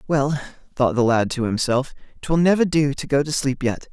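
Listening to the speech here, nothing stood out as a technical fault at any point.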